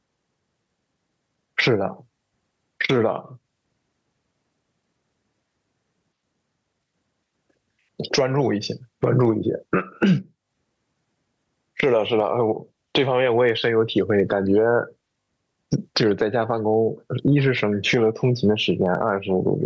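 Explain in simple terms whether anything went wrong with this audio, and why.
Gain pumping throughout the clip: loud and soft parts end up closer in level and the sound is squashed, likely from a fast limiter taming an overly high level.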